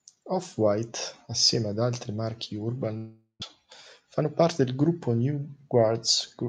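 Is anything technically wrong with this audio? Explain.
Yes, there's one problem. From 2.97 to 3.44 s the speech cuts out. The last sound drags on as a fading buzz, goes silent for about 0.1 s, then picks up again slightly late, with about 0.4 s of audio gone. That's likely a long network dropout, with the receiver stretching out the last sound it got to cover a gap it couldn't recover.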